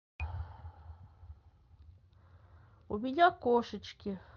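Speech, carried over a call link with an 8 kHz top end, has a short concealed packet loss at 2.99 s. About 10 ms of audio never arrived and the receiver patched it by extending the preceding sound. That makes a brief smear or wobble, not the silent gap or sharp click of a plain dropout.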